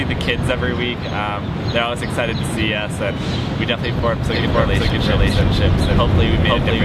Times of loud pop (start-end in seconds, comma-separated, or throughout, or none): none